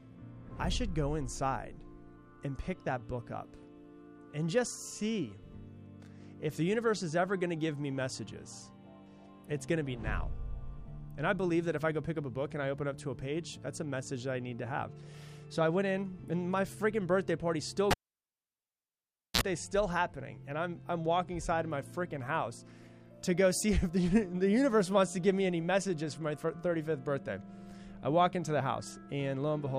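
At 17.91 s a cable is pulled and plugged in. A pop cuts the sound for about 1.45 s, then 60 Hz mains buzz sounds briefly before a second pop at 19.41 s.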